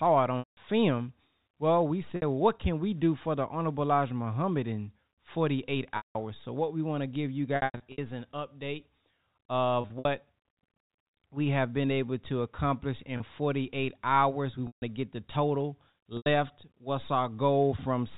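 The speech drops out in eight spots, and each one is packet loss with pitch repetition. The receiver fills each gap by looping the last pitch period and fading it over about 50 ms. That's why the 30 ms hole at 13.17 s and the 60 ms one at 2.16 s just sound like a briefly held, buzzy note. The 180 ms losses at 0.39 and 5.97 s, 150 ms at 14.67 s and 90 ms at 16.17 s buzz, then fade to silence before the speech cross-fades back. At 7.56 to 7.98 s and 9.81 to 10.05 s the losses are scattered, so several short held, buzzy notes cluster there. The 30 ms step fits 30 ms packets. The telephone-band G.711 coding is working normally underneath.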